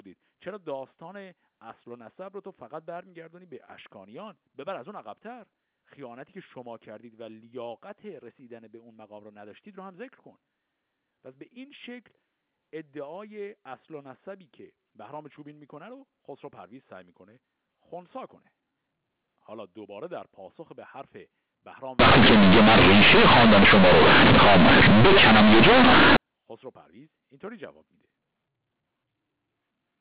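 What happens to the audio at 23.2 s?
Companded audio read as linear runs from 21.99 to 26.17 s. A-law bytes play as plain 8-bit samples, so the speech becomes loud, buzzy distortion with heavy noise in pauses.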